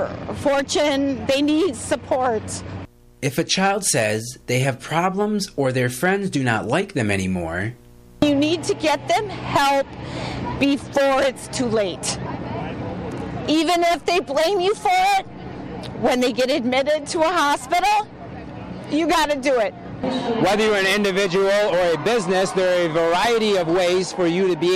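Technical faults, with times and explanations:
No technical faults, with times and explanations, to report.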